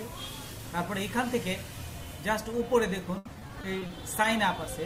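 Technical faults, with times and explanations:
3.17–4.25 s, repeated packet loss (robotic sound): across this stretch the audio breaks up into eight short holes, the longest about 80 ms, each patched by stretching out the sound just before it, so roughly a fifth of the span, about 220 ms, is synthetic fill. Because the patches recur in quick succession, the result is a choppy, buzzy, robotic texture rather than the single clean gap of one dropout or a steady grit like bit-depth reduction.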